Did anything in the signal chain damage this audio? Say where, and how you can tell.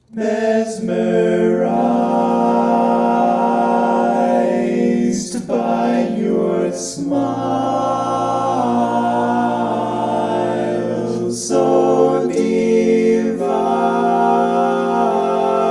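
No, nothing in the signal chain damaged this audio.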